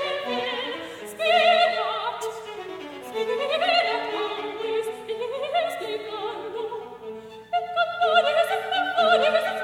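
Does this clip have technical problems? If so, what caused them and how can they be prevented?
No, this music clip has no technical faults. Nothing in it calls for a cause to trace or a fix to apply.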